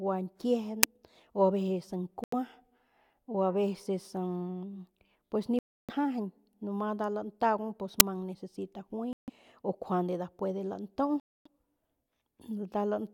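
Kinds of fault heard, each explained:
Uninitialised buffer: two loud 10 ms cracks, after "gua ñkiejen" and before "necesita juay o", from leftover memory played as audio.
Bluetooth dropout: four silences of about 85 to 300 ms, one after "pues necesita juay", likely from packets reaching the headphones late and being dropped.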